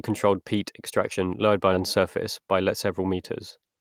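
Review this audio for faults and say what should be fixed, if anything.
At 1.73 to 1.75 s, right after "controlled peat extraction lowered", there is a skip ahead. Roughly 0.7 s of speech is gone, and the two sides are butted together with no silence and no concealment fill. A plain dropout would leave a hole or a smeared patch. This jump is seamless, which points to already-queued audio being discarded when the jitter buffer overflowed. Sizing the jitter buffer to absorb bursts and trimming its backlog gradually, rather than flushing it, would prevent this.

From 2.40 to 3.14 s there is a jitter buffer speed-up. The speech runs at about 107% speed, hurried but at unchanged pitch, as the receiver repeatedly cut out short pitch-period pieces totalling around 70 ms to drain an over-full buffer. A resampling or clock-rate error would raise the pitch along with the tempo. Here the pitch holds steady, which marks this as time compression. 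Smoothing packet delivery upstream so delayed packets don't arrive in clumps would reduce how often the buffer must catch up.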